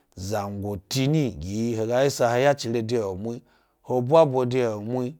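Nothing goes wrong anywhere in this speech recording, so there's no technical fault to point to at any moment.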